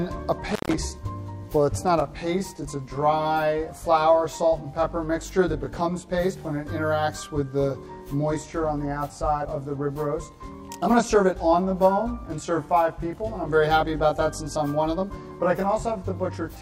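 A loose connection briefly opens between 0.50 and 0.74 s, an intermittent contact fault. The signal drops out for about 140 ms, with crackle where the contact breaks and remakes and only faint hiss left in the gap.

From 2.0 s to the end, one channel runs late by roughly 20 ms before the two are summed to mono, causing channel delay (comb filtering). Shared content cancels at evenly spaced frequencies from around 20 Hz upward, leaving the audio rough and slightly doubled.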